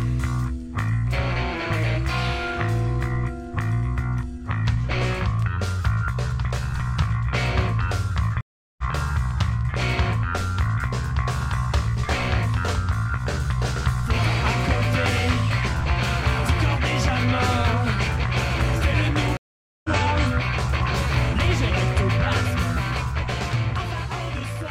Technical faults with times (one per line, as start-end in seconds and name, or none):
8.41-8.83 stream reconnect
19.37-19.90 stream reconnect